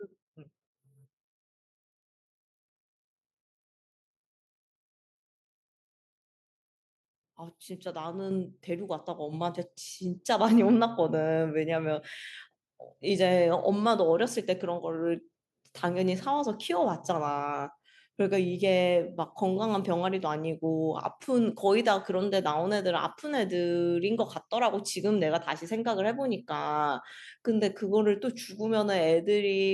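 At 8.31 s and again at 9.33 s the microphone volume is stepped up, by about 6 dB and then about 4 dB, as the call software raises the input gain. Speech and background jump louder together, and the waveform envelope widens abruptly at each point.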